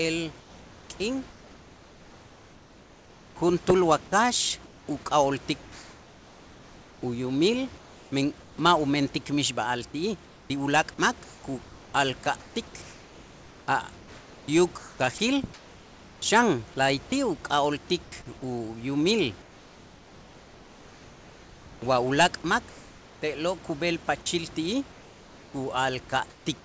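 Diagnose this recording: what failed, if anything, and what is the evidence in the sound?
Comfort noise in place of the background at 0.40–8.58, 10.26–12.56, 13.98–16.22, 18.04–18.12, 19.42–23.22 (just before "te'lo' kub'el") and 24.92–26.46 s, in call processing. In these pauses the real room background gives way to flat, featureless hiss, about 2 dB quieter at 18.04 s. This is likely discontinuous transmission, with the receiver synthesising noise in place of the background.

Sound dropped by the voice detector at 12.24 s and 15.18 s, also in call processing. Each time about 20 ms of sound is replaced by comfort noise. Likely the detector judged a quiet fragment to be background and stopped sending until it triggered again.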